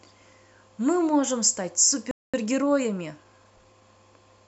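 It's a short speech clip, and about two seconds in the sound just cuts out. That's a playback stall: from 2.11 s to 2.34 s the output goes silent for roughly 224 ms, then the speech resumes. Most likely the player ran out of buffered data or its audio thread got blocked, so nothing reached the output until it recovered. The gap lands mid-flow rather than at a natural pause, which is why it's so noticeable. Right after that you get time-compressed catch-up, running from 2.34 s to 3.82 s. The player is working off the backlog the stall left behind by trimming tiny slices out of the audio and cross-fading across the cuts. That makes this stretch play about 1.15 times faster than normal while the pitch stays put, so it sounds hurried.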